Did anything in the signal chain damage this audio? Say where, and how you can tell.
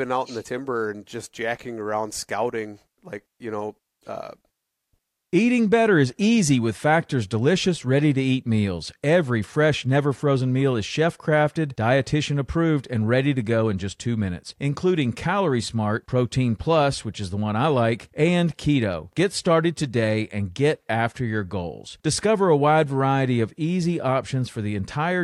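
No, nothing in the signal chain damaged this speech.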